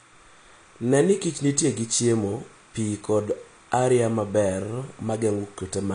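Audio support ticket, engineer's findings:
Timecode bleed, throughout the clip. Faint chirping warble behind the speech, roughly 35 dB below the programme, alternating between tones near 1 kHz and 2 kHz. Rate fits 30 frames/s linear timecode. Probable component: LTC track or cable adjacent to the audio path, coupling its square wave in through crosstalk or a shared run. Check routing, shielding and track assignment.

Band-limiting and codec smear, throughout. Nothing above 9.8 kHz; speech sounds dull, sibilants fizzy and warbly, transients smeared, damage plainly audible. Likely cause: AAC-LC encoding at a low bitrate, consistent with about 32 kbps. The encoder's quantisation against its hearing model lowered the cut-off and starved the upper bands of bits, leaving spectral holes and substitute noise. Check the export or streaming bitrate settings.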